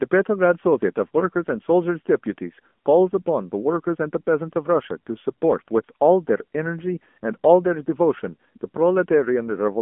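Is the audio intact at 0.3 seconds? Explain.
No, AMR narrowband mobile codec damage runs throughout, so at 0.3 s the speech sounds buzzy and synthetic, consistent with roughly 7.4 kbps, and a spectrogram shows nothing above 3.6 kHz.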